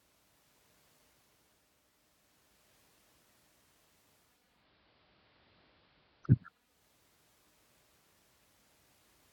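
Digital radio blending to analogue affects this speech clip from 4.21 s to 6.85 s. The receiver lost its digital signal and cross-faded over about 0.47 s to the station's AM broadcast and later back, bringing AM's narrower bandwidth, hiss roughly 40 dB below the signal, and a level change of about 1 dB.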